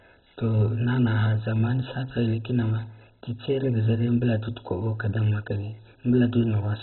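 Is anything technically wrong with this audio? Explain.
Yes. Throughout the speech there is heavy damage consistent with MP2 compression, likely from an encoder starved of bits, which fits a rate around 16 kbps. MPEG Layer II divides the signal into 32 sub-bands and shares out bits between them; with so few available, every band above 4 kHz is dropped and the remaining ones are coarsely quantised. The result is dull and muffled, with a gurgling, grainy texture. A spectrogram shows a hard ceiling at 4 kHz and blocky, flickering energy beneath it.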